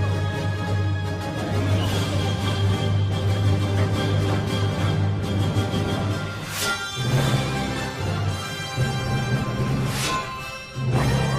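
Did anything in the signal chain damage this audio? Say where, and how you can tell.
No, nothing in the chain audibly damaged this audio; no stage leaves a trace anywhere in the clip.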